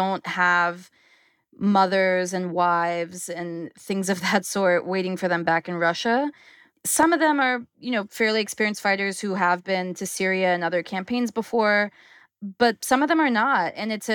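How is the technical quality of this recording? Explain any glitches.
The recording has one clear glitch, a single loud pop in the middle of the speech.

From 7.03 to 7.05 s a sharp pop sits on top of the speech, which continues underneath without a break. This is most likely a sudden voltage step or pulse, for example from a switch, static or a driver glitch, which the following circuitry shaped into a brief transient. It peaks roughly 10 dB above the speech. On a waveform it is a narrow spike that stands well above the surrounding envelope. On a spectrogram it is a thin vertical stripe across the whole frequency range.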